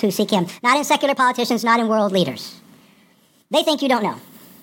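From start to end the speech runs 1.5 times too fast and about 7 semitones high: wrong sample rate, 32 kHz audio played at 48 kHz. The spectrogram's formants and harmonics sit stretched upward, and the waveform is time-compressed.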